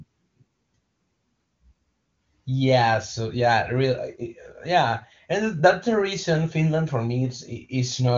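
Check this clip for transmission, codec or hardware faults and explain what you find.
Nothing here points to a fault: the speech comes over an AMR wideband (HD Voice) link at its top rate of 23.85 kbit/s, with the expected cut-off near 7.2 kHz, and none of the transmission or hardware trouble you'd be listening for shows up.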